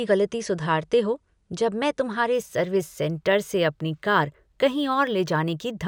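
From 2.34 s, imaging from linear upsampling: straight-line interpolation dulls the top and leaves faint mirror images above 11 kHz, heard as metallic shimmer on sibilants.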